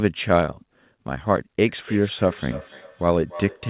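From 1.68 s to the end, each word returns roughly every third of a second, thin and ringing, at about 18 dB below the speech. This is feedback echo between two devices: one device plays the call aloud and the other's microphone picks it up again.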